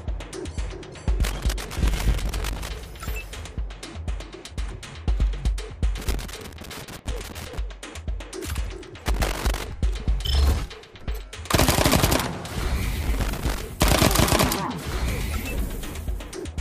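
Loose connector crackle breaks in four times. It runs from 1.24 to 2.69 s, from 5.98 to 7.58 s, from 9.06 to 9.67 s, and from 13.03 to 13.62 s. Each burst is irregular scratching and crackle laid over the audio. A worn or dirty contact in the signal path is making and breaking as it shifts. The sound is chopped in rapid, uneven fragments. Any DC on the line turns each break into a pop.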